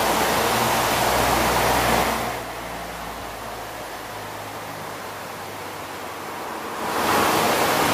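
Listening closely, nothing stood out as a technical problem anywhere in the audio.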